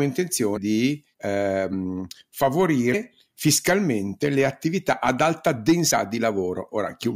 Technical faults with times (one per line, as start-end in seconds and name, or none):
0.56 compressed frames skipped
1.72 compressed frames skipped
2.93 compressed frames skipped
5.90 compressed frames skipped